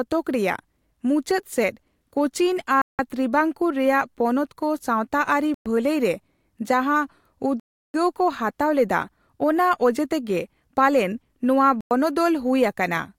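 Speech drops to dead silence four times, at 2.82–2.99 s, 5.54–5.66 s, 7.60–7.94 s and 11.81–11.91 s (about 100–340 ms each), likely Bluetooth stalls where the headphone buffer ran empty awaiting resent packets; waveform and spectrogram show flat, blank gaps.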